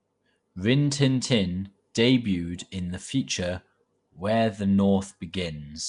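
From start to finish the speech carries a rough, hissy halo and a smeared, underwater feel, with nothing above 10.6 kHz. That's likely Nellymoser compression, Flash's old mic codec, starving weak bands of bits and filling them with noise, at something like 44 kbps.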